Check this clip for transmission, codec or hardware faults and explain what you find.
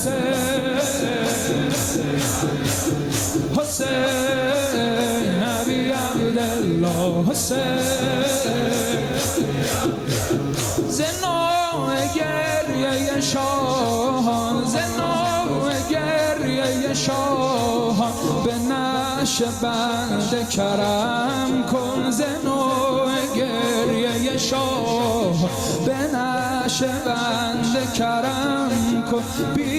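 Gain pumping runs through the whole clip. The level ducks by around 5 dB under each loud sound. The likely cause is excess gain feeding a fast limiter. A waveform shows a flattened, squashed envelope.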